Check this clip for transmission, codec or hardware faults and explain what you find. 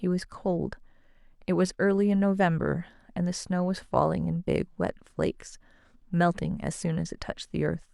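No faults can be heard anywhere in the recording. There is nothing to report at any point in the speech.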